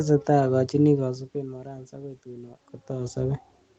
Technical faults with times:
none

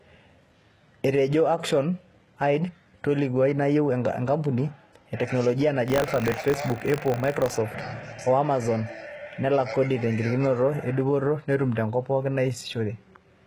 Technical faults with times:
0.00-13.46 HE-AAC compression
5.86-7.57 buffer tearing

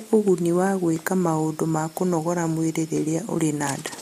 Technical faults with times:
0.96-3.98 clock drift buffer slips

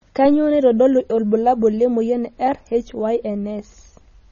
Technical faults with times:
0.00-4.31 MP3 compression

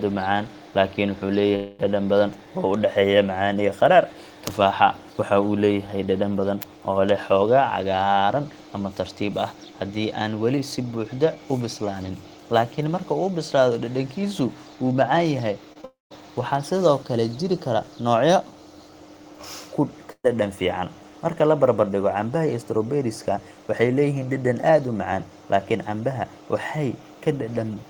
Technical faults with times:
1.55-1.81 long network dropout
15.73-15.85 short concealed packet loss
15.85-16.12 long network dropout
20.12-20.29 burst of packet loss

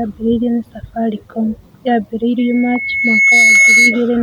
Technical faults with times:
2.38-4.03 loudspeaker feedback squeal

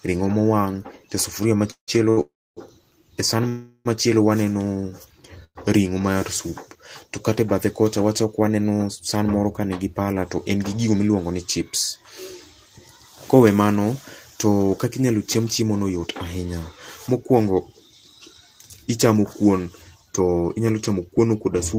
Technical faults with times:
1.71-1.90 call audio freeze
2.10-2.19 short stall from a late packet
2.21-2.59 call audio freeze
3.49-3.87 call audio freeze
5.44-5.57 call audio freeze
8.57-11.09 jitter buffer speed-up
15.39-21.74 jitter buffer speed-up

